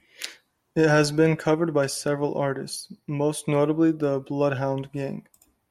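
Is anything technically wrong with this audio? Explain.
No, nothing technically wrong turns up anywhere in this bit of speech, so there's nothing to flag here.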